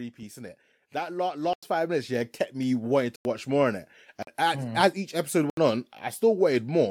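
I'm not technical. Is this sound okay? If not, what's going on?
No. From 0.17 to 3.9 s there is automatic gain rising: the recorder judged the input too quiet and turned itself up gradually. The voice and the background noise get louder together, which is how you can tell it isn't the speaker moving closer.

There are also four blocks of digital silence, at 1.53 s, 3.16 s, 4.23 s (just before "as mm as each") and 5.50 s (just after "mm as each episode"). Each is a brief hole lasting from about 46 to 93 thousandths of a second. Unlike a natural pause, the sound drops to total silence and comes back with no fade.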